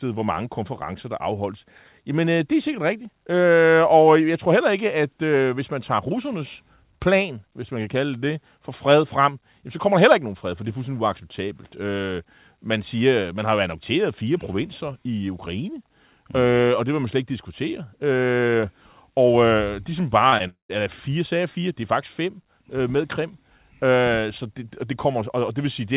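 Right around 20.30 to 20.34 s and again at 20.38 to 20.42 s there's short concealed packet loss: roughly 20 ms of audio missed the decoder each time, and the receiver patched the hole by extending the last sound, so you get a quick smear or wobble rather than a clean gap.

Then from 20.48 to 20.71 s the audio drops out, most likely a long network dropout. The receiver keeps the last sound going as a fading buzz or hiss, then gives way to about 120 ms of near silence before the audio resumes further on, with that stretch simply missing. All of this sits on a narrowband call sound with nothing above 4 kHz, which fits a G.711 A-law path at 64 kbps.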